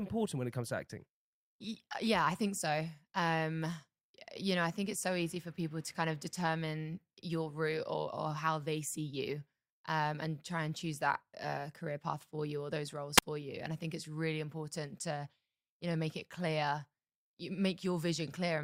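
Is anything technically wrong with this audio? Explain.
Yes. At 13.16 to 13.23 s, just after "you or those roles", a brief lift of hiss gives way to a near-silent hole of 39 ms before the speech returns. This is a wireless microphone squelch dropout: the FM radio link faded until the receiver's squelch muted its output.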